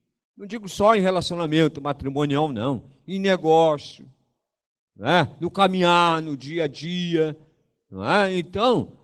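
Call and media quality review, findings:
Opus voice compression, full clip. Speech plainly coarse, hoarse, slightly robotic. Hybrid mode: SILK below 8 kHz, thin CELT layer above. Sounds like roughly 16 kbps with 20 ms frames. Spectrogram: smeared, blocky high band, blurred harmonics; waveform shows no distinct marks.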